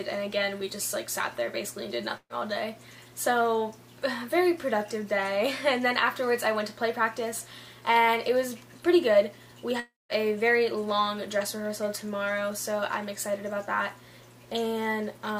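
At 2.17 s a burst of packet loss lasting about 150 ms: the last sound is held and fades, then audio resumes with roughly 120 ms missing. At 9.80 s a concealed gap of about 330 ms decays to silence before audio returns with about 300 ms gone, likely a long network dropout.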